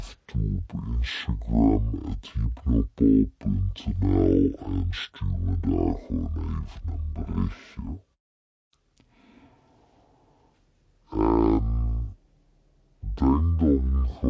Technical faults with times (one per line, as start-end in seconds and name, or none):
0.00-14.29 wrong sample rate